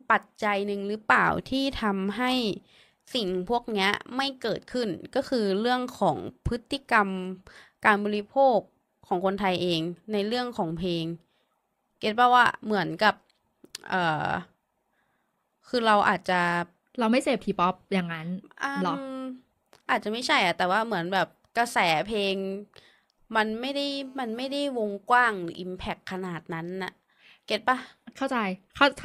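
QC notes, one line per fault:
23.65–24.56 s, GSM phone buzz: a hard, raspy 217 Hz buzz with dense harmonics sits about 32 dB below the speech for 0.91 s, steady throughout as a call would hold it. The buzz comes from a nearby 2G handset's transmit bursts being rectified in the audio circuit. Unlike mains hum, it pulses at 217 Hz rather than 50 or 60 Hz and ignores the speech entirely.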